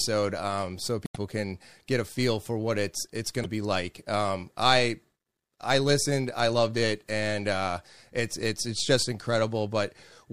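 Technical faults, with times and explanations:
1.03–1.17 s and 3.41–3.46 s, damaged data in a compressed stream: Short glitches break the speech after "um so" and after "what it's it's going". Corrupted bytes confuse the decoder, which loses sync and hunts for the next valid frame. The first glitch adds 1.7 ms.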